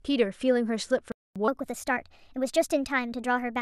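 At 1.12 s the speech cuts out for about 240 ms, a playback stall, until 1.36 s. The player likely ran short of data and output nothing while it waited. The waveform shows a flat gap, and the spectrogram a clean vertical band of silence.

From 1.48 s to the end, the section plays at the wrong speed, 1.21 times too fast, likely from a clock mismatch. The speech sounds hurried and roughly three semitones higher. Harmonics on the spectrogram sit higher and closer together in time.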